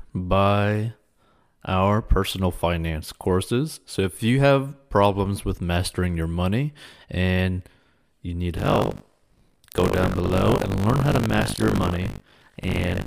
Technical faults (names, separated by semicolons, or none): buffer tearing